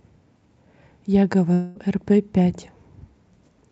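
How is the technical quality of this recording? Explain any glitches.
The recording has one clear glitch. It passed through a call codec, with the highs rolled off at about 8 kHz, which points to Opus at around 64 kbps.

From 1.53 to 1.77 s the sound smears into a fading buzz or hiss instead of carrying on, likely a long network dropout, where the receiver stretched the last audio to cover the missing stretch.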